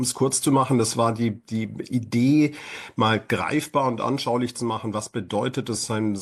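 Nothing stood out on listening; no technical faults can be heard anywhere in the audio.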